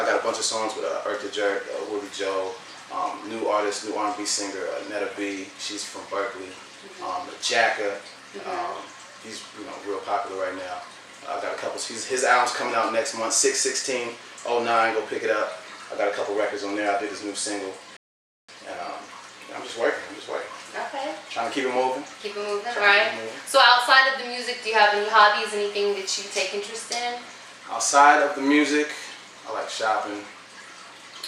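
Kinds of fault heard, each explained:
Rebuffering stall: playback ran out of downloaded audio at 17.97 s, sat silent for 0.52 s, then resumed exactly where it stopped, losing nothing.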